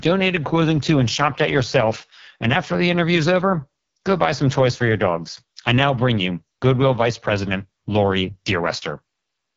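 AMR wideband (HD Voice) codec damage runs throughout the speech. Above about 6.4 kHz the codec synthesises shaped noise, and nothing reaches past 7.5 kHz. The heavy, rough, raspy texture of the pulse-driven vocal model fits its lowest 6.6 kbit/s mode.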